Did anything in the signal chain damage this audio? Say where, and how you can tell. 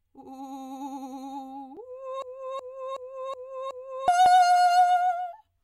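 Yes. At 1.77 s and again at 4.26 s the music jumps forward abruptly, a tiny skip of only a few milliseconds where the two sides butt together with no gap. The skips are about 2.5 s apart, so this is likely audio missing between chunks at the driver or buffer stage. The recorder or processor appears to work in 2.5 s blocks and drops a sliver each time it hands off from one block to the next.

From 2.22 s to 4.08 s the music stops moving forward and instead stutters. The same 0.37 s fragment repeats exactly, five times in a row, at about 2.7 repeats per second. This is a system hang loop, also at the driver or buffer stage. The computer stalled while the audio hardware kept replaying one ring buffer, whose length fits a 16384-sample buffer. Roughly two seconds of the actual music never made it into the recording.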